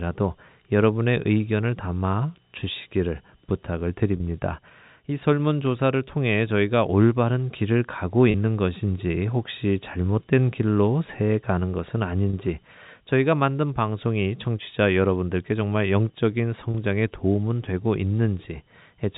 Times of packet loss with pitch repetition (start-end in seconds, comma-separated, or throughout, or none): 4.17-4.20, 8.31-8.34, 12.30-12.33, 16.71-16.74